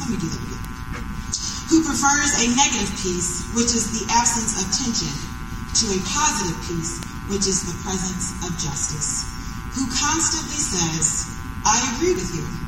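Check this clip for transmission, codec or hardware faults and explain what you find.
Three bit error spikes, at 0.65 s, 7.03 s and 12.16 s. A flipped bit in memory or on a digital link throws a sample, or at 7.03 s a brief run of samples, to a power-of-two value and straight back. Each event is a lone broadband tick, peaking around -8 dBFS for the first two and around -14 dBFS for the last, unrelated to the surrounding sound.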